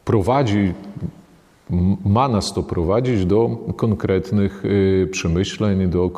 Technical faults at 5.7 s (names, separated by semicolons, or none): none